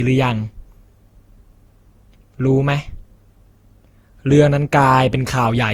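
Throughout the speech there's a swirly, hollow smear with blurred attacks, likely generation loss from about seven re-encodes, sounding like Opus near 64 kbit/s.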